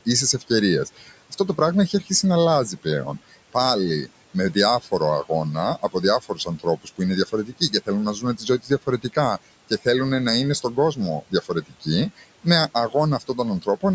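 Throughout the clip, noise suppressor artifacts are present. The suppressor lowers the bands it judges to be steady room noise by about 18 dB, so the background, which sits about 19 dB below the speech, sinks between phrases and returns underneath them. On a spectrogram the noise floor shows as patchy, frame-by-frame gaps, with nothing above 8 kHz from the call microphone processing.

The suppressor also cuts speech, mistaking parts of it for noise at 0.85–2.1 s, 3.29–3.55 s, 4.06–4.88 s, 5.8–9.86 s, 10.62–12.46 s and 12.89–13.83 s. Drops reach about 12 to 18 dB. The longest span, 5.8–9.86 s, loses roughly a second in total, and the others lose a few hundred milliseconds or less each. The affected speech sounds swallowed or faint. The waveform shows sudden dips in the envelope, and the spectrogram shows energy missing from those frames.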